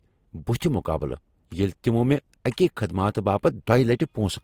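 Throughout the speech, two layers of codec artefacts sound together, likely from transcoding between lossy codecs, fitting Vorbis near 63 kbit/s then Opus near 32 kbit/s. A spectrogram shows blotchy, patchy upper bands and nothing above 20.2 kHz.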